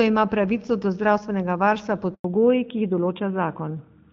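A speech recording with a handover gap from 2.14 to 2.24 s, right after "pravico do zdravstvenega varstva". The sound fades within a few tens of milliseconds and stays silent for 100 ms while the call switches networks, so no speech frames arrive. A waveform shows a flat stretch, and a spectrogram shows a blank vertical band. From 2.24 s to the end comes a fallback to narrowband. Energy that earlier reached the HD Voice band now stops sharply at 4 kHz, leaving a hard horizontal ceiling on the spectrogram and a duller, rougher sound that fits a switch to a narrowband AMR codec at about 12.2 kbit/s.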